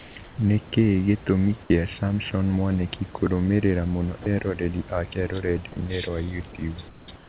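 A speech clip in which the sender's transmission likely switched to discontinuous mode during pauses, so the receiver filled those gaps with comfort noise in place of the background. At 0.00–0.16 s, 0.24–0.38 s, 6.88–7.08 s and 7.16–7.29 s, the real room noise, which sits about 21–25 dB below the loud speech, gives way to a smooth, featureless hiss about 3–5 dB quieter, and the texture of the room returns between these stretches. Separately, the voice detector likely misjudged a quiet stretch as background, so this is sound dropped by the voice detector: at 4.22–4.26 s, 40 ms of speech is cut out and replaced by the same steady synthetic noise, leaving a brief gap before the detector triggers again. Throughout, the call path passes nothing above 4 kHz, which fits a 64 kbps G.711 mu-law link, and the underlying room noise sits about 24 dB below the speech.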